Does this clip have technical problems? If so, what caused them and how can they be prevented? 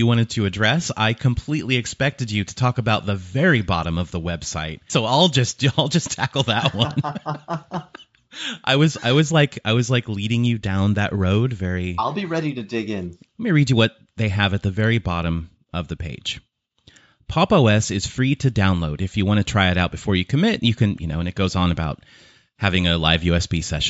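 No, nothing stood out as a technical problem on listening, so there is nothing here to trace to a cause or prevent.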